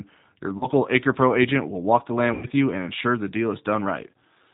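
Throughout, the speech sounds band-limited, slightly rough and synthetic, with nothing above 4 kHz: the plainly audible mark of the G.729 codec, which fits 8 kbit/s G.729A. At 0.58 to 0.67 s, and again at 2.34 to 2.47 s between "agent will walk the" and "you and ensure the", the sound smears into a buzzy tone or coloured noise that fades, and stays weak briefly afterward. This is VoIP packet loss concealed by the speech codec, which extrapolated across gaps of about 30 ms and 90 ms, consistent with one and then three lost packets.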